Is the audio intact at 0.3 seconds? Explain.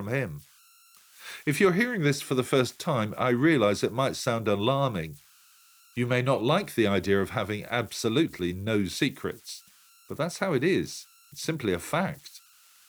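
No. At 0.3 s, as throughout the clip, converter idle tones are present: an undithered delta-sigma converter settles into repeating bit patterns when its input is small, producing a faint whistle around 1.5 kHz about 31 dB below the speech, with grainy noise beneath quiet passages. On a spectrogram this appears as a thin, steady horizontal line near 1.5 kHz running through pauses; the waveform shows a low, regular ripple where silence should be flat.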